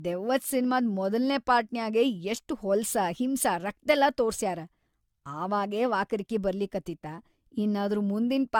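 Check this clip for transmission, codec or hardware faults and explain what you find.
There's one problem, and it runs the whole length of the speech: generation loss. The sound is swirly, smeared and hollow, consonant attacks blur, and nothing gets above 17 kHz. That's likely AAC-LC re-encoded around seven times, each pass stacking fresh quantisation damage beyond what a 96 kbit/s encode alone would leave.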